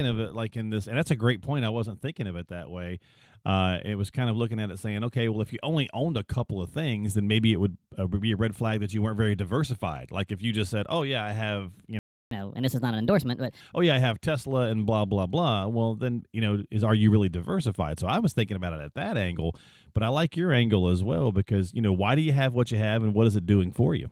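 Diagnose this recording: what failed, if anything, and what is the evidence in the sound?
At 11.99 s the speech cuts out to silence for about 0.32 s, then resumes at 12.31 s. That's a playback stall, most likely the player's buffer running dry or its output thread getting blocked, so nothing reached the output until it recovered.

Right after, from 12.31 to 13.61 s, you get catch-up at higher speed: the speech runs at 1.25x and sits roughly four semitones sharp. The player is resampling its backlog to claw back the lost time, then drops to normal pitch once it's caught up.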